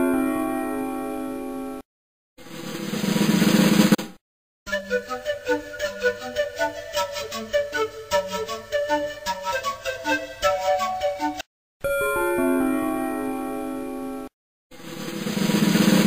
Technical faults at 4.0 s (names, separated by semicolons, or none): digital broadcast dropout